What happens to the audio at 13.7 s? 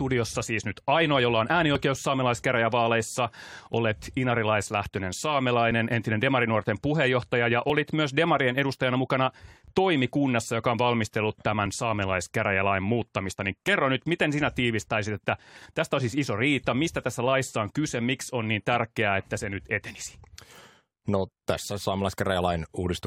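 At 13.68 s the speech has an overlap between stream segments. Two adjacent chunks of the stream claim the same stretch of time, and the player trims the duplicated region even though that audio was never actually repeated. A few milliseconds of real signal are discarded, so the waveform jumps discontinuously. It is heard as a brief click or tiny skip just before "nyt miten sinä tiivistäisit", at a join that fits 2-second segments.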